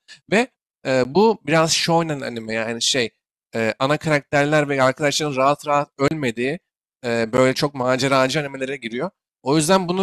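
Blocks of digital silence cut into this speech clip at 1.04 s, 6.08 to 6.11 s and 7.37 s. The signal drops abruptly to silence and returns without any fade. The two 10 ms gaps sound like ticks, the 30 ms one like a brief hole. The likely cause is the output buffer not being filled in time.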